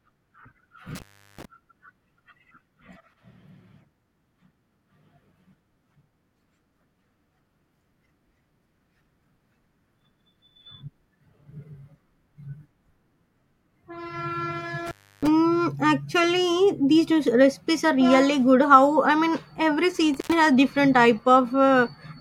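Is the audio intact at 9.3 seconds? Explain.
Yes, the audio is intact at 9.3 seconds, with no fault at that moment.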